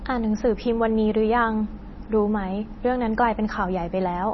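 A low-bitrate encoder, likely MP3 compression at around 24 kbps, starves the speech of bits throughout. Nothing survives above 5.9 kHz, so the sound is dull, and weak frequency components flicker in and out, giving a heavy watery, swirling texture with smeared onsets and chirpy sibilants.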